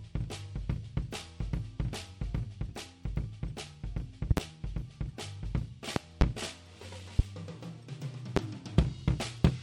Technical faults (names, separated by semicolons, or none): loud pop